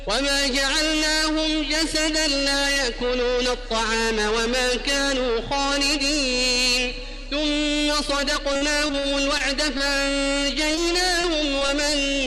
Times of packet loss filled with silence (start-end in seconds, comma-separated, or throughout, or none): none